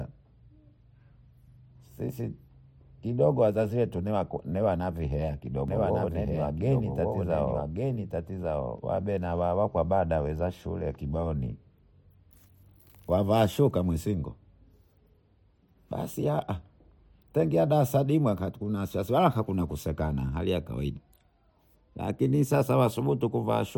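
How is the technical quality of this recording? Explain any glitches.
A doubled audio track affects the speech from 5.68 to 8.78 s, after "kidogo wazazi wetu niwanakuhea" and before "wabena wawakwabada waweza shule". A full-band copy runs about a second behind at roughly equal loudness, likely from a second, slower capture path mixed in. Unlike an echo or reverb, it has no decay or room colour and cuts in and out abruptly.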